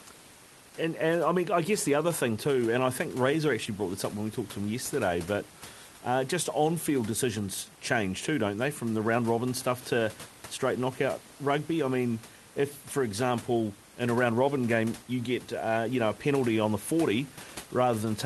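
Nothing in this speech recording stood out as a technical fault on listening.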